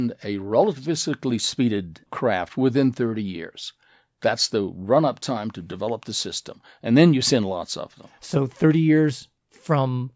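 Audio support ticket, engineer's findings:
No audible faults found in this speech recording.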